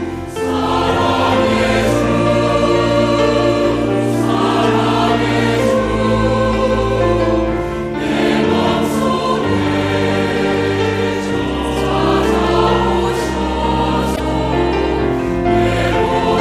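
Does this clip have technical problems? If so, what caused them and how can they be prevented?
Yes. Damaged data in a compressed stream at 14.13–14.20 s: corrupted bytes made the decoder lose frame sync, giving a brief glitch. Prevent it with checksummed, error-protected transfer and storage.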